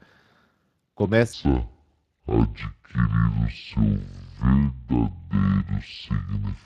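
A speech clip carrying Speex codec damage from start to finish. The voice sounds noisy and hoarse. The upper band is only a hazy noise fill. That points to a Speex setting around 22 kbps, which starves the excitation of bits. From 1.33 s to the end, a section at the wrong speed runs at 0.554 times normal. Pitch and pace fall together, roughly ten semitones lower, deep and dragging. The likely cause is playback against the wrong clock.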